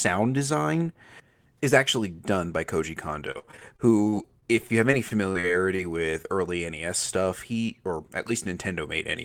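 From 3.31 to 5.80 s, packets repeatedly arrive late or not at all, causing repeated packet loss with a robotic sound. The receiver patches each hole by extending the last sound, then hits the next gap soon after. About 300 ms of the audio is missing across this stretch, with roughly 389 ms synthesised to cover it, about 16% of the span. The longest single gap is 48 ms. The speech turns choppy, with fragments dropping out.

Between 6.22 and 6.26 s, a short concealed packet loss occurs. About 20 ms of audio fails to reach the decoder in time, and the receiver fills the hole with roughly 14 ms of sound continued from what came just before, then blends back into the real signal. The result is a brief smear or wobble in the speech, and a short sound at that point may be lost.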